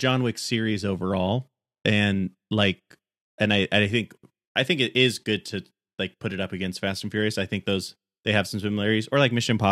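Nothing stood out on listening to this recording of speech.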